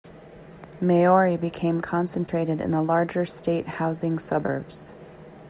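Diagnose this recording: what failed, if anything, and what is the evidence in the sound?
Network, short concealed packet loss: 20 ms gaps at 2.26 s, before "in the larger state", and 4.46 s, after "the larger state housing", each smeared over by extending the preceding sound.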